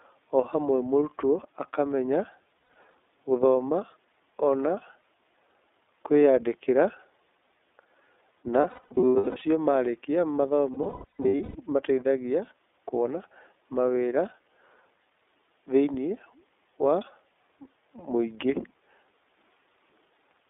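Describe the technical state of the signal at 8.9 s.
At 8.9 s the sound repeatedly smears into a held, slightly buzzy, breathy vowel, with clean stretches snapping back in between. These are lost iLBC frames, spread from 8.61 to 9.42 s. About 510 ms of that 810 ms window is missing, which fits seventeen 30 ms frames, in runs of up to around a tenth of a second. The decoder fills each gap by repeating the last pitch cycle mixed with noise.

Beneath this, the iLBC codec shapes the whole clip. The speech sounds thin, rough and somewhat synthetic, with the band held to 250 Hz through 3.6 kHz. Each 30 ms frame's excitation is coded independently at 13.33 kbps. That independence is why the speech recovers almost immediately after each loss.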